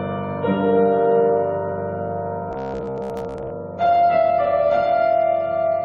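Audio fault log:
2.51–3.50 s, robotic sound from repeated short buffers: the audio turns into a rigid, metallic buzz at 66.8 Hz that only loosely follows the original sound. This is likely playback starved of new data, looping roughly 15 ms blocks while most real audio is skipped.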